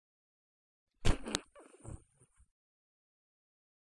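At 1.35 s a sharp, loud click snaps through the sound regardless of what the signal is doing: a file header played as audio. A second WAV piece was joined on without stripping its header, so those few dozen header bytes were decoded as samples.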